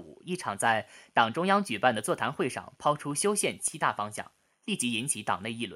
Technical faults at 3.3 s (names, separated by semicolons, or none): CD scratch ticks